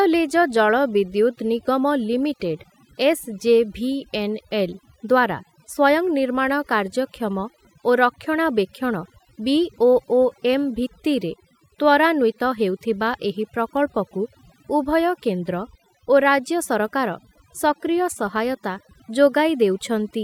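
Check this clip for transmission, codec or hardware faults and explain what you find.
One fault is present: overdone noise removal, running through the whole speech clip. An overly aggressive noise reducer cuts frequency bands near its noise estimate, leaving near-silent gaps with twinkling specks.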